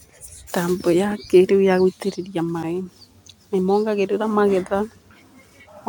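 At 0.47 s, again at 2.63 s, and from 5.67 to 5.69 s, the speech is broken by brief glitches, the mark of damaged data in a compressed stream. Corrupted bytes make the decoder misread a frame and hunt for the next valid header, so each event is a disruption lasting about 20 ms. Unlike a packet dropout's silent gap or a plain click's single spike, these come from the decoder losing sync.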